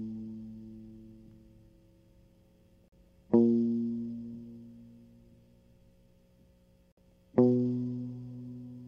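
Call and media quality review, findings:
Gap between stream segments: segment timestamps misaligned at boundaries, so the player inserts silence. Music is cut by hard-edged dropouts at 2.88–2.93 s (about 41 ms) and 6.92–6.97 s (56 ms), spaced about 4 s apart, consistent with 4-second segments. No content lost.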